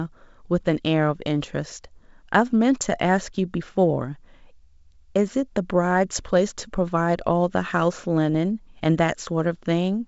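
At 8.34 to 8.37 s, bit errors on an ADPCM link break the speech with a rough pop lasting about 26 ms, which fits a few corrupted frames. Flipped bits upset the decoder's step size and predictor, so the damage rings briefly before recovering. The waveform shows a jagged spike with a short level jump, and the spectrogram a thin broadband smear, over a G.722 wideband signal reaching 7 kHz.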